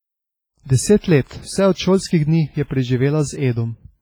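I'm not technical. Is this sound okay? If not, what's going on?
No. The speech has a ringing, washy quality from start to finish, with a hiss that swells and fades along with the voice. That pattern points to heavy WMA compression as the likely cause, where the codec smears detail and discards quieter parts of the sound.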